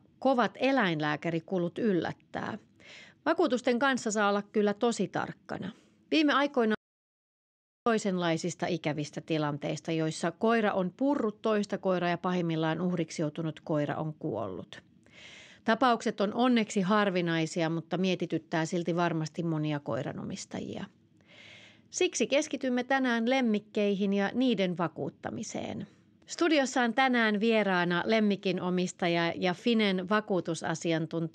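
A speech clip with an audio dropout to silence from 6.75 to 7.86 s: about 1.1 s of sound is lost and the level falls to silence, with no room tone, unlike a natural pause. Likely cause: the input link briefly failed while recording continued.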